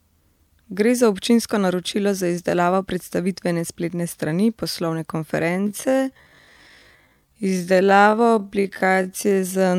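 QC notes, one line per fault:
5.47 to 9.79 s, time-stretched section: right through to the end the speech suddenly slows to 0.58 times its pace while the pitch stays put, so it drags. Likely software stretching it to fill a length by repeating short slices.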